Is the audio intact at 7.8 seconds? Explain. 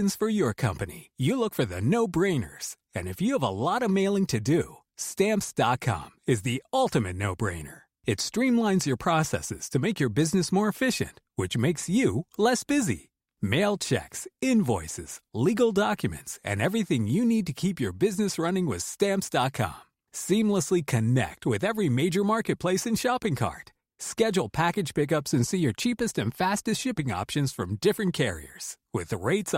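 Yes, the speech plays through cleanly at 7.8 seconds, with no dropout, click, distortion or other fault at that moment.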